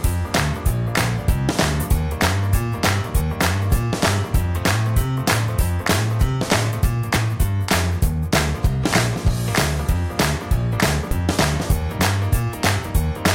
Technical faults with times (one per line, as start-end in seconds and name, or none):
11.11 audio missing between chunks